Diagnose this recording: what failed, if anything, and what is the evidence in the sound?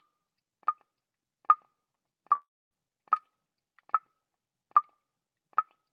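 At 2.35 s the audio stops being the real signal and turns into a fading buzz-like continuation of the last sound. For the last 0.27 s before it resumes at 2.73 s, there is only silence or a low steady floor. About 0.36 s of material is missing, and playback picks up later without it. That pattern points to a long network dropout, likely a run of lost packets that the receiver's concealment stretched and then muted.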